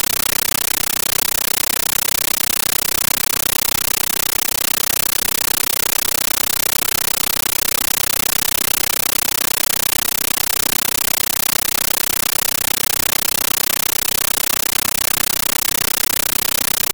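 Speech is entirely replaced by a compressed stream played as audio: undecoded AC-3 data heard as harsh, very loud static chattering 31.25 times a second, each 13.3 ms noise burst followed by silent padding. That rhythmic on-off gating separates it from steady white noise or a clock mismatch.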